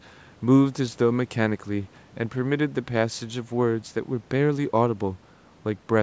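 A speech recording that has passed through a call's microphone processing, with nothing technically wrong with it.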